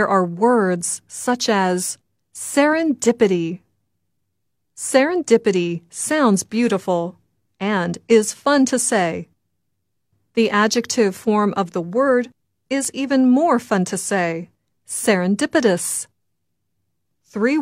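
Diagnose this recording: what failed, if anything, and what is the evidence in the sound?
Nothing in the chain shows a failure: no stage, from the analogue wiring through conversion, buffering, network and storage to playback, leaves any audible evidence of trouble anywhere in the recording.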